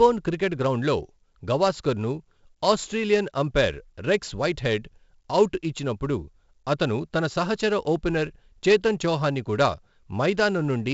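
4-bit ADPCM compression runs through the whole speech clip, with heavy damage. Each sample is coded as a coarse 4-bit step from a predicted value, which fits a 64 kbps stream, so the quantising error rides some 20 to 30 dB under the signal and rises and falls with it. Louder syllables carry a gritty hiss, and sharp onsets smear where the step size lags behind. Nothing reaches above 7.7 kHz, which dulls the top end.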